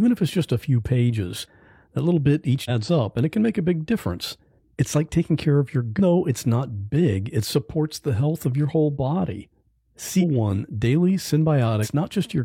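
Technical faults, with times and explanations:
2.65 to 2.71 s, 5.95 to 6.00 s, 10.17 to 10.24 s and 11.80 to 11.88 s, damaged data in a compressed stream: four short disruptions in the speech, each about 50 to 80 ms long. The first falls after "pages that little bit", before "up and it can"; the second after "taking care of your", before "though it's not big". In each, part of the compressed stream is wrong, so the decoder misreads or rejects those frames, loses sync and searches for the next frame header.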